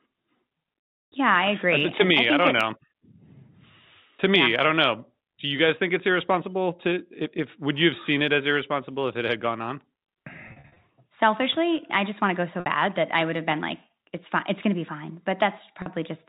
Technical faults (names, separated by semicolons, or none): packet loss with pitch repetition